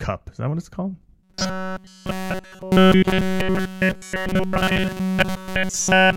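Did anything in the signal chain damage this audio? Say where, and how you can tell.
Yes. From 1.23 s to the end of the clip, the speech collapses into robotic sound from repeated short buffers: a rigid, metallic buzz at 188 Hz that only loosely tracks the words. The stage is likely the driver or buffer layer, starved of input and looping a roughly 5.3 ms block throughout. On a spectrogram this shows as flat, evenly spaced harmonic lines at multiples of 188 Hz; the waveform shows identical short cycles repeating.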